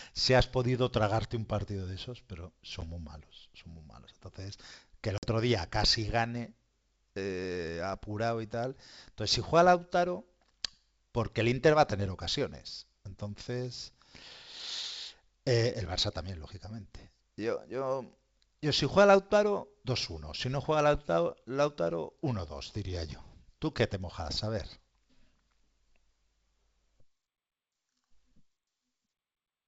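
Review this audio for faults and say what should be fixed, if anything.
Packet loss on an ADPCM call leaves hard silent holes at 2.81–2.83 s and 5.18–5.27 s. The decoder falls out of step, so speech returns unevenly. Add jitter buffering, redundancy or loss concealment to the G.722 link.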